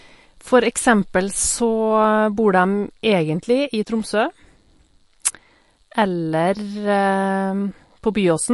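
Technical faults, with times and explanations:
Throughout, MP3 compression: the speech sounds watery and swirly, with nothing above 11.3 kHz, a hard treble cut that is likely from a low bitrate around 48 kbps rather than a simple low-pass filter.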